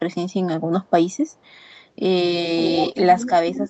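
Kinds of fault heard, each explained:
Echo leak: a delayed copy of the speech returns about half a second late, likely from a far-end loudspeaker whose echo canceller let residue through. It stays faint, near about 40 dB down, in short scraps at 0.3 and 0.83 s and a longer stretch from 1.09 to 1.87 s, then rises to about 5 dB below the speech from 2.65 to 2.92 s.
Speech suppressed in double talk: while both sides are active, the near talker's level is pulled down, likely by an echo canceller unable to separate talker from echo. It dips by about 20 dB in pieces between 2.54 and 2.76 s, then by about 15 dB from 2.92 s to the end.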